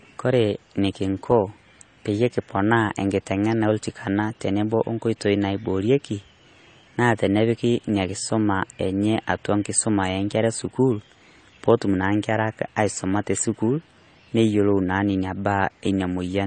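Across the whole speech clip, nothing survives above 9 kHz, and the artefacts of two different lossy codecs sit on top of each other: swirling, smeared high end together with a watery, blurred quality around consonants. This is likely transcoding between lossy codecs, consistent with a low-rate MP3 re-encoded as low-rate AAC-LC, where the second encoder wastes bits on the first one's errors. A spectrogram would show a hard ceiling at 9 kHz and patchy, holed mid-high bands.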